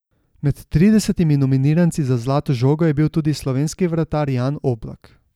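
No technical faults can be heard in this recording.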